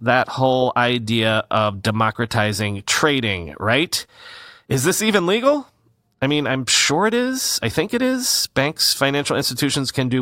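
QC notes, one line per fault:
No faults found in this speech clip on listening.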